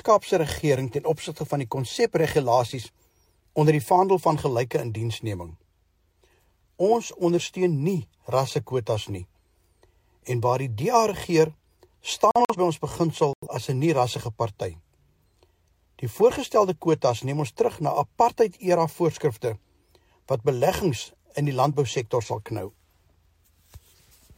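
At 12.31 to 12.56 s and 13.33 to 13.47 s, corrupt frames were muted: silent holes starting abruptly, with timing kept, unlike concealment, which would fill the gap.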